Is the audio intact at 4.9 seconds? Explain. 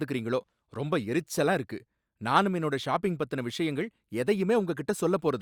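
Yes, at 4.9 seconds the speech plays through cleanly, with no dropout, click, distortion or other fault at that moment.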